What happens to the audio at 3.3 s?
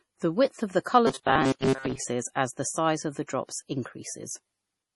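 Right after "the size of the", at about 3.27 s, there's a pre-echo: a short smear of hiss lasting about 16 ms that lands just ahead of a sharp attack. The codec spreads its quantisation noise across a whole block, so when the attack sits late in that block, noise sized for the loud part bleeds into the quiet moment before it. You hear a brief hiss first, and the onset comes across soft rather than crisp.

That sits on top of damage that runs through the whole clip and is likely MP3 compression. Nothing comes through above 11.5 kHz, so the top end sounds dull, and the heavy damage fits a low bitrate around 32 kbps. With bits that scarce, weak frequency lines get dropped and come back from frame to frame, which gives the speech a watery, swirly quality, with metallic chirps on the s sounds.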